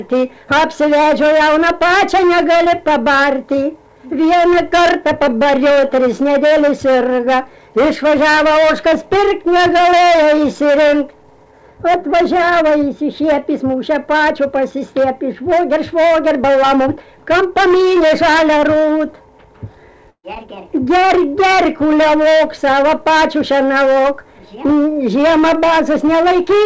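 Around 20.10 to 20.25 s there's a burst of packet loss. The receiver bridged a 134 ms gap by carrying the last sound on and fading it down, finishing with about 70 ms of silence, and then picks up 140 ms further along. Nothing reaches above 8 kHz, which fits a G.722 call path.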